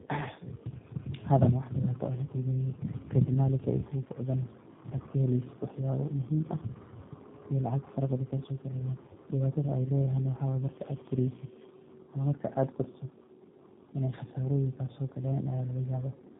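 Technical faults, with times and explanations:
Throughout, tandem speech coding: the speech passes through two low-rate speech codecs in a row, first AMR-NB at 7.4 kbit/s, then G.729A at 8 kbit/s, with a G.711 mu-law hop between them. The second coder models a signal already damaged by the first, so the errors add up. The result sounds rough, muffled and warbly. Nothing reaches above about 3.8 kHz, which removes the crispness of sibilants.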